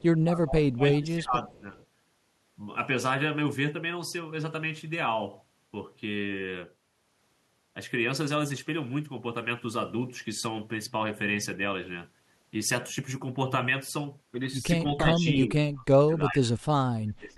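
From 0.21 to 1.77 s the speech dips by roughly 15 dB and thins out. This is speech suppressed in double talk. The likely cause is the far side talking at the same moment. The echo canceller could not tell this talker from its own loudspeaker echo, so it pulled the level down. The sound turns muffled and patchy for about a second and a half.

Right after, from 1.79 to 1.86 s, a faint echo leak appears. It is a short, delayed copy of the speech, about 348 ms late and roughly 35 dB below it. It is likely that the far end's echo canceller let some of its loudspeaker pickup pass back. It is a brief ghost.

The suppression returns near the end. From 14.98 to 15.53 s the speech drops by about 10 dB. From 15.74 to 16.43 s, and again from 16.83 s to the end, it falls by around 30 dB and nearly cuts out in pieces.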